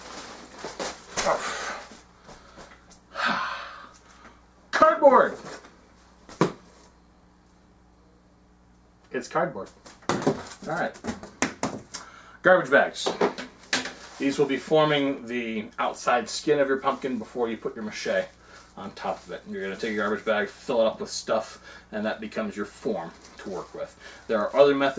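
Nothing is technically wrong with this clip.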